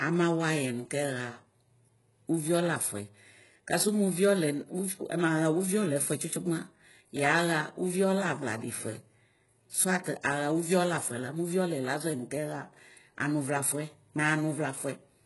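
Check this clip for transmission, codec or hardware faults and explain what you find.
Two codec problems show up in this speech clip: heavy low-bitrate compression throughout, and one short pre-echo.

Across the whole clip the treble sounds synthetic, and nothing gets through above 11.5 kHz. The likely cause is HE-AAC compression, at a quality that points to something around 12 kbps. The codec spends its bits on the lower spectrum and fakes the top by copying lower bands upward under a coarse envelope. Harmonics don't line up across that join, so the s sounds come out gritty, metallic and a bit lispy.

There's a pre-echo from 10.04 to 10.06 s, a hiss about 21 ms long sitting just ahead of a sharp attack. A transform codec spreads its quantisation noise across a whole block, so when a loud onset lands late in one, noise sized for that onset leaks into the quiet stretch before it. You hear that smear of hiss, and the attack itself loses its edge and sounds softened.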